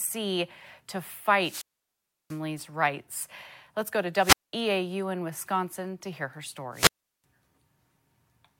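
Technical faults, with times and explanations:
1.38–2.41 s, 4.16–4.54 s (after "go to") and 6.72–7.24 s (after "to hear her"), wireless microphone squelch dropout: each time the transmitter's FM signal weakens, hiss swells, and the receiver's squelch then cuts the output for about 0.69 s, 0.20 s and 0.37 s before the speech comes back. On a spectrogram, a brief wash of broadband noise leads into a blank column; on the waveform, the trace drops flat to near silence.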